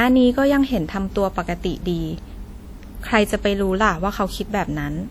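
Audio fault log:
Throughout: WMA compression. The speech sounds ringing and washy, with hiss that swells and fades with the signal. Quantisation noise smears across tens of milliseconds around each sound. The damage is plainly audible, likely from a transform codec running near 48 kbps. Content extends to 20.1 kHz.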